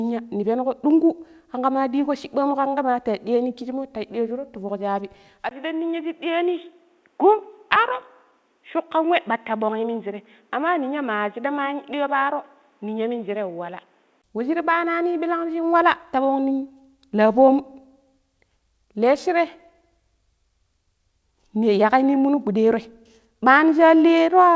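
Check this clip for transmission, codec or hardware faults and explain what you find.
Two faults stand out: a stretch of dull, narrowed sound partway through, and a jump forward inside that stretch.

From 5.49 s to 14.24 s the speech turns boxy and muffled, about 5 dB quieter, with nothing above 3.8 kHz and a new noise floor about 40 dB down, after a 20 ms silence. The likely cause is the input switching to a poorer device with its own band limit, tone and noise.

At 7.76 s the speech skips ahead: roughly 0.4 s of audio is missing and the two sides are joined with no gap. Later audio was already queued, so the dropped stretch was simply passed over and playback jumped forward.

Outside that stretch, the sound reaches up to 8 kHz, which fits a wideband G.722 call path.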